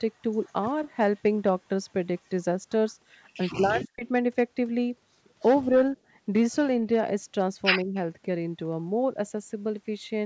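At 2.89 to 2.93 s a faint, very quiet copy of the speech returns about 150 ms late. This is an echo leak, likely from a loudspeaker at the far end. Its echo canceller let a trace through, and it was sent back.

From 3.57 to 4.04 s the speech drops away deeply for about half a second. This is speech suppressed in double talk. The canceller likely mistook the talker for echo while both sides spoke. Smaller dips follow at 5.63 to 5.75 s and 7.84 to 7.95 s.

At 6.03 to 6.09 s the room sound dips by about 10 dB for a moment. This is background gated by the echo canceller. It clamped the microphone while the loudspeaker played, then released it.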